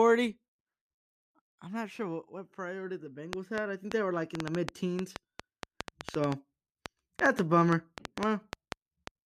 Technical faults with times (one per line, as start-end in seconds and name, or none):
3.33-9.08 train of clicks